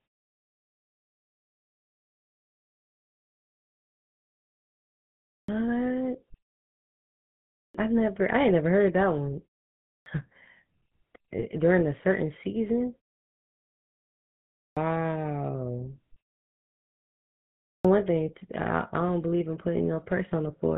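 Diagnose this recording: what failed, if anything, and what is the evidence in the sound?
GSM full-rate codec, throughout. Codec stage. The speech is buzzy and gravelly with nothing above 4 kHz, which fits a 13 kbps pulse-excited vocal-tract model.

Clipped start after a pause, playback stage. At 5.28, 7.54, 9.84, 14.53 and 17.65 s, about 0.2 s of speech onset is swallowed while the sleeping output device wakes.

GSM bit errors, network stage. Squawks and gargling at 11.38 to 11.44 s and 18.01 to 18.03 s. Corrupted filter, pitch or gain values distort those frames.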